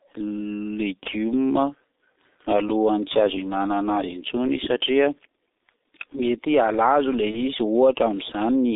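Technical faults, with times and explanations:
Throughout: G.723.1 codec. The audio is confined to a telephone band of roughly 250 Hz to 3.7 kHz, so it loses both low body and upper brightness, and the speech sounds heavily muffled and hoarse with smeared consonants. The coarseness fits a low-rate stream of about 6.3 kbit/s. Coding in 30 ms frames with a slowly updated vocal model cannot follow fast articulation, so transitions blur and the texture turns rough.
7.31 to 7.41 s: VoIP packet loss concealed by the speech codec. A 30 ms gap, which points to a single lost frame, was filled by the decoder repeating its last pitch and spectral shape at falling gain. This produces a brief stretched, fading sound in place of real speech. Because each decoded frame depends on the previous one, the sound stays weak or distorted for several tens of milliseconds after the gap, until the decoder resynchronises.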